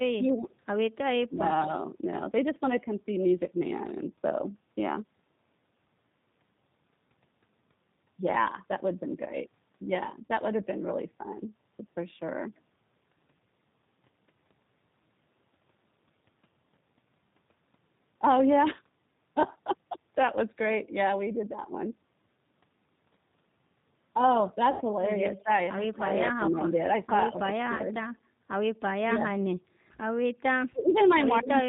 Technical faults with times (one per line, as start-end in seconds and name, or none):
0.00-31.68 G.729 codec
0.17-0.48 speech suppressed in double talk
1.28-1.44 speech suppressed in double talk
10.26-10.31 VoIP packet loss concealed by the speech codec
24.71-24.82 VoIP packet loss concealed by the speech codec
27.32-27.94 speech suppressed in double talk
27.76-27.82 VoIP packet loss concealed by the speech codec
29.08-29.32 speech suppressed in double talk
30.71-31.56 speech suppressed in double talk
30.89-31.15 echo leak